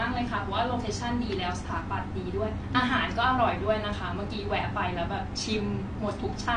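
From start to finish the speech has a dull, smeared quality with a fizzy warble on sustained sounds and sibilants, and nothing above 9.8 kHz. That's AAC compression damage, likely from AAC-LC squeezed to a low bitrate around 32 kbps, where the encoder drops the top band and coarsely quantises what's left.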